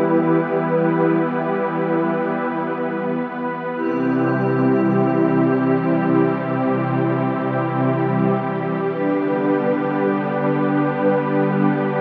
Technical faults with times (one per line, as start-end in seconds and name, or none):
none